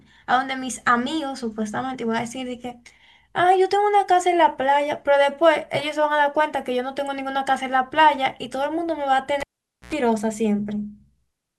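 Speech with a cable pulled and plugged in from 9.41 to 9.93 s: a pop, about 0.48 s of near silence, an 86 ms burst of 60 Hz mains buzz, then another pop, unlike a plain dropout.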